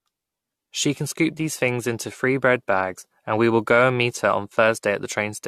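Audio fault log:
throughout generation loss: the speech has likely passed through a lossy codec several times over, consistent with around four AAC-LC passes near 64 kbit/s, each requantising on a shifted frame grid, so noise and spectral holes pile up, leaving a swirly, hollow, smeared sound with blurred attacks.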